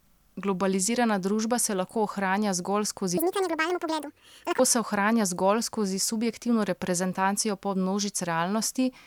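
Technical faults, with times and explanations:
3.17–4.59 s, section at the wrong speed: just after "se lahko ohranja zgolj", about 1.4 s of speech runs 1.84 times too fast, so it rises close to ten semitones and sounds squeaky and rushed until "se ohranja zgolj skozi" returns at normal rate. Unlike a pure pitch shift, timing and pitch move together, which points to the section likely being played back against the wrong clock.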